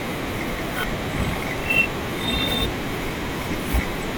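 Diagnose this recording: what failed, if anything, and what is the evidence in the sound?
The capture side likely overran its buffer: samples weren't collected before the hardware overwrote them, a dropped buffer (overrun). At 1.58 s and 2.51 s the speech jumps straight ahead with no silence, roughly a tenth of a second missing each time.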